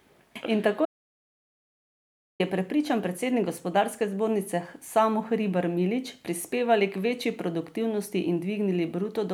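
At 0.85 s the speech cuts out abruptly and the track falls to silence, with no room tone or noise floor underneath, until it resumes mid-flow at 2.40 s. This is an audio dropout to silence lasting about 1.54 s. The likely cause is a momentary loss of the input signal, such as a disconnected device, a failed link or an unintended mute, while the recorder kept writing silence. Whatever was spoken during that stretch is unrecoverable.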